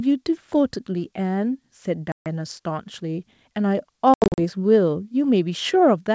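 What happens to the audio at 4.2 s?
Between 4.14 and 4.39 s the speech breaks into hard-edged silent gaps, about 180 ms lost in all with the longest 80 ms, and resumes slightly distorted. This is packet loss on an ADPCM call: the decoder's predictor and step size lose step with the sender's.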